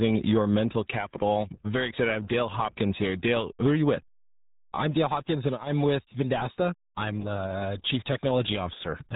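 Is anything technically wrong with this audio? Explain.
Yes. Throughout, the speech carries RealAudio 14.4 codec damage. Nothing above 3.8 kHz survives, and the remaining band is heavily gargled and muffled, which fits RealAudio 1's 8 kbit/s dial-up coding. Unlike a simple telephone band-limit, the voice itself is smeared and gargly.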